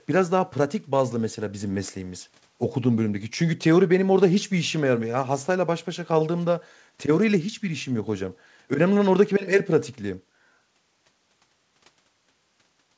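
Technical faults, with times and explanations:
Nothing to flag here: the speech sounds just as you'd expect from a wideband call path, with the top end stopping at about 8 kHz, which fits a G.722 codec at 64 kbps.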